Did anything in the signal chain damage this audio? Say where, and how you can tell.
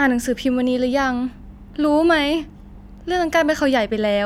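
No, no damage is audible.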